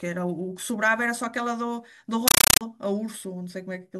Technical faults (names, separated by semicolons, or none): compressed stream played as audio